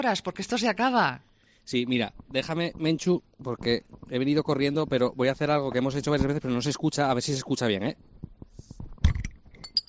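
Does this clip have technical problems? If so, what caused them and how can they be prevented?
No, nothing in this recording points to a capture, transmission or playback fault, so there is no cause to trace and nothing to prevent.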